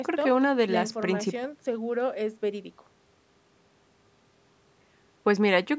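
A short bit of speech that has gone through a call's microphone processing, with the lowest bass trimmed and nothing above 8 kHz, and there's nothing technically wrong with it that I can hear.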